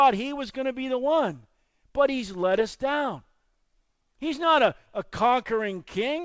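No faults are audible anywhere in this recording.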